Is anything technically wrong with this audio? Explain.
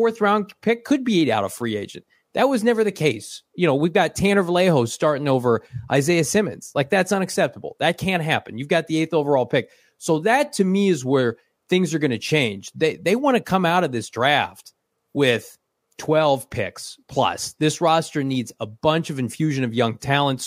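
No, nothing in this speech recording points to a technical fault, and the signal holds steady throughout.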